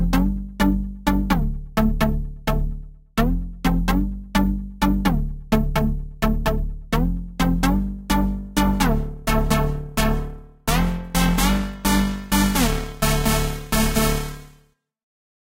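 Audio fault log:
No faults are audible anywhere in this recording.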